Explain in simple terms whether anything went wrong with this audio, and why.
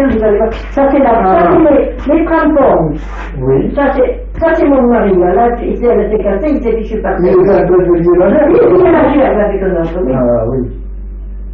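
Nothing went wrong with this audio, as there are no faults to be heard anywhere in it.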